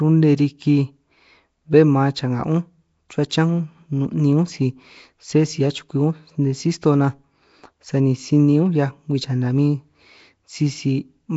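From start to finish the speech carries a rough, hissy halo and a smeared, underwater quality, and nothing reaches above 7.7 kHz. The damage is plainly audible throughout. The likely cause is Nellymoser compression, the old Flash microphone codec, at a rate that fits about 32 kbps. It codes short blocks with very few bits per sample, leaves quieter bands without bits and fills them with noise, which produces that grainy wash around the speech.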